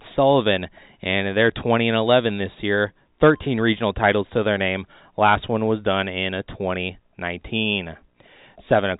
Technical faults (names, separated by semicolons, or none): none